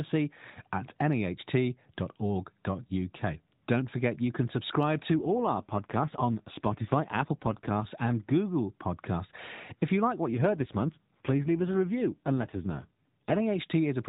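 At 5.13 s, after "forget you can subscribe", an AMR rate drop lasting to 7.92 s cuts coding bits, which fits a step from 12.2 to about 5.9 kbps, so the narrowband speech turns rougher and buzzier without any gap. It recurs from 10.32 to 13.40 s, after "you like what".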